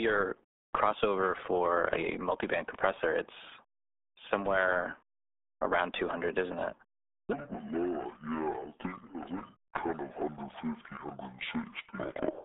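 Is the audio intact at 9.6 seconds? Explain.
No. From 7.33 s to the end, the speech plays at 0.53 times its original speed. Pitch and tempo drop together, roughly ten semitones, so the voice sounds deep and drawn out. The likely cause is a section played back against the wrong clock rate.

At 9.6 s, as throughout the clip, the sound also carries heavy RealAudio 14.4 codec damage. Nothing passes above 3.8 kHz, and the band sits between 250 Hz and 3.6 kHz, which fits an 8 kbit/s dial-up speech codec. The result is a muffled, gargly texture.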